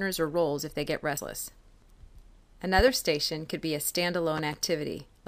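At 1.14 to 1.18 s the audio breaks up briefly, the sign of damaged data in a compressed stream. The decoder hit corrupted frames, lost sync and resumed at the next valid header. A spectrogram shows a narrow vertical smear of scrambled, unrelated energy. On the waveform there is a short discontinuity where the signal doesn't line up on either side. Two loud pops follow, each a close pair of sharp clicks laid over the continuing sound. The first pair, at 2.79 to 2.91 s, peaks around 15 dB above the signal. The second, at 4.38 to 4.56 s, peaks around 10 dB above it. These are likely electrical transients from a plug, switch or static discharge entering the chain. The waveform shows tall, spiky excursions. On a spectrogram they appear as thin full-height vertical lines, two per event.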